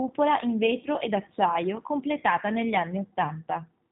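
Throughout, the speech carries plain G.729 codec damage, which fits 8 kbit/s coding. Everything above 4 kHz is gone. The rebuilt voice sounds rough and synthetic.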